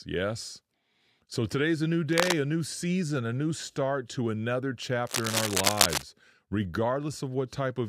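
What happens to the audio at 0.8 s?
Nothing goes wrong at 0.8 s; the speech runs on intact through that moment, with no dropout, click or distortion.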